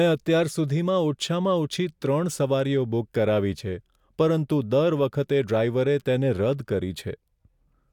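No technical faults are audible.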